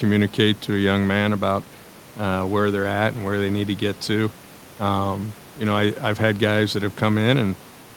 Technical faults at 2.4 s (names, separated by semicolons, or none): none